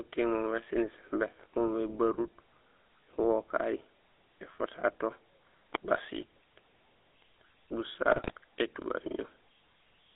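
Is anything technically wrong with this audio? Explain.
Yes. Throughout, the GSM full-rate codec leaves a buzzy, gravelly roughness inside a 300 Hz to 3.6 kHz band. It models the vocal tract with a coarse pulse excitation, which fits a 13 kbps stream. That buzz sets it apart from a plain band-limited line.

From 8.12 to 8.32 s, GSM bit errors garble the decoder's filter, pitch and gain values, producing squawks and gargling. This fits about ten corrupted frames, not the clean silence of dropouts.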